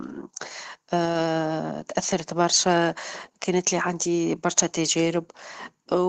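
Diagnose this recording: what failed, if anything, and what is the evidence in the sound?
Lost packets rebuilt from error correction, 1.05 to 1.27 s: a network-stage fault. There is no dropout, but about 120 ms of the speech turns rougher and noisier before clearing, which points to roughly six separate packets going missing. Opus carried a low-bitrate backup of each lost frame in the packet that followed, and the decoder played those coarser copies to fill the hole. This call was coded at 24 kbps with audio up to 8 kHz.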